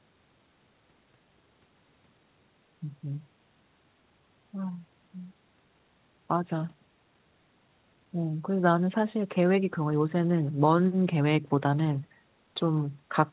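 Nothing in the speech here points to a technical fault. A faint room noise sits about 44 dB below the speech, and nothing comes through above 4 kHz, which fits a narrowband telephone codec such as G.711 A-law on the call path.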